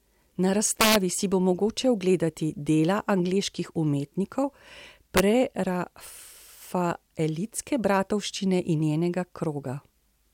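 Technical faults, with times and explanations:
0.81–0.96 s and 5.17–5.20 s, integer overflow: loud speech peaks crack violently just before "si bo mogoče ogledati" and again before "prerafaelitske bratovščine in". The signal was driven past the largest integer, by about 4 dB and then about 1 dB, and it wrapped to the opposite sign. Each peak flips across the full range. Clipping would flatten those peaks into a dull buzz. Here the flips sound as sharp snaps, the first longer and harsher.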